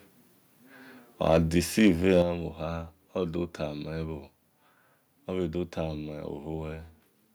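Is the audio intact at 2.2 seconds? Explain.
No, not quite. From 1.26 to 2.21 s there's microphone overload: the speech peaks crackle with a harsh, flattened edge, likely because the input gain pushed them about 3 dB past the converter's ceiling, so around one percent of the samples get their tops sheared off.

Right after, at 2.22 s, the microphone volume is stepped down: the voice and the background both drop suddenly by about 7 dB in a single jump, likely the call software reacting to that clipping by lowering the device's input gain.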